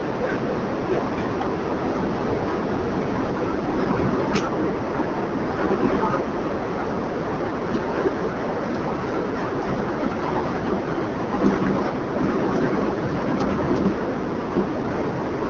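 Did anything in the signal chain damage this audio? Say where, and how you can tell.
Yes, at the codec stage: it's the AMR wideband (HD Voice) codec, and it's working hard. Across the whole clip the speech sounds rough and raspy, with a grainy, buzzy edge, which fits the 8.85 kbit/s mode, near the bottom of its range. There's nothing above about 7.1 kHz. The codec models the voice with a pulse-driven vocal tract up to 6.4 kHz and fakes the top band with shaped noise, and at this rate the modelling can't keep the speech smooth.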